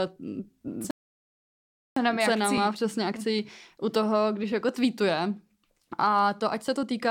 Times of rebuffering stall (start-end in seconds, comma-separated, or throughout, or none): 0.91-1.97